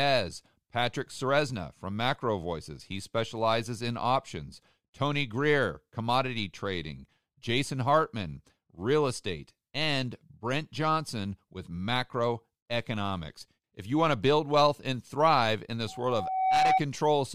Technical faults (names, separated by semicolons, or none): loudspeaker feedback squeal